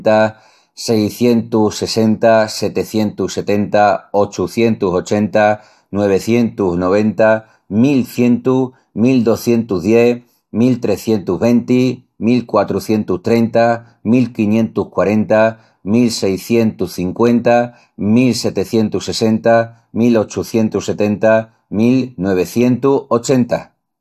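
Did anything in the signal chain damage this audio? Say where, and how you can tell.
No, nothing in the signal chain damaged this audio.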